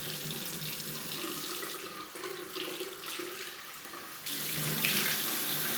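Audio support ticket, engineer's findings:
No faults found in this audio; nothing to report for the ticket.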